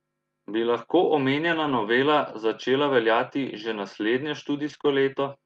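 From 1.43 to 1.81 s, a lost packet rebuilt from error correction: ten lost packets, which fits 20 ms frames, were replaced by the low-bitrate copies carried in the following packets. There is no gap, but the sound turns rougher and noisier. On a spectrogram the harmonics look smeared and grainy beneath the call codec's cut-off near 12 kHz.

The same repair recurs from 4.65 to 4.75 s and from 4.85 to 4.91 s.

Between those two repairs, from 4.77 to 4.81 s and again from 4.81 to 4.85 s, comes short concealed packet loss. Each time about 20 ms of audio never arrived, and the decoder filled it by extending the previous sound. It is heard as a brief smear or wobble. The waveform shows a repeated or flattened stretch, and the spectrogram a short blurred patch.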